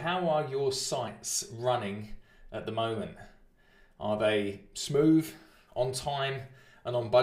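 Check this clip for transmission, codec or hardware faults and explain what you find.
Nothing here catches the ear as a transmission, recording or equipment problem, so there's nothing to flag.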